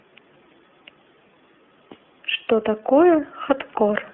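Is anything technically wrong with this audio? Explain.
Yes. Throughout the speech, the signal has passed through the iLBC codec, a narrowband VoIP coder that encodes each frame's excitation on its own rather than predicting from the previous one. The band is limited to roughly 250 Hz to 3.4 kHz, so the speech sounds thin and telephone-like, with no air or sibilant sparkle. The coding damage is plainly audible: a rough, slightly synthetic grain that fits 30 ms frames at a low bitrate.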